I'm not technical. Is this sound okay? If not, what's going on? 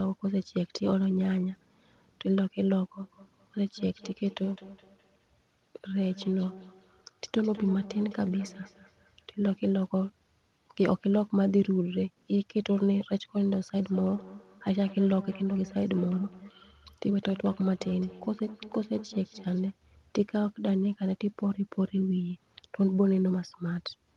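No. From 3.02 to 9.28 s and again from 13.78 to 19.79 s there's a feedback echo between two devices. Two devices in the same room are on the same call, so one plays back what the other's microphone picked up, and that microphone hears it again. The speech returns about a fifth of a second later, quieter and a bit hollow and ringing. Each echo canceller only cleans up its own device's sound, so this loop gets through.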